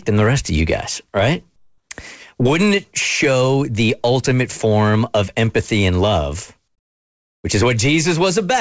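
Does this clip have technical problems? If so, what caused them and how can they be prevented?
Yes. Comfort noise in place of the background appears from 1.56 to 1.90 s and from 6.68 to 7.44 s. The real background turns into steady, featureless hiss, about 7 dB and about 18 dB quieter. The likely cause is discontinuous transmission: the sender stops sending during pauses, and the receiver synthesises noise instead. Turning off discontinuous transmission on the call prevents it.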